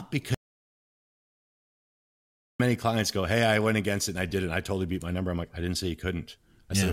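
An audio dropout to silence runs from 0.34 s to 2.60 s in this speech clip, so roughly 2.25 s of the recording is simply absent. The talker is cut off almost at once, the track falls to silence with no room tone or background underneath, and then speech resumes abruptly at "clients go". The likely cause is the input being lost for that stretch, perhaps through a dropped connection or mute, while recording carried on writing silence.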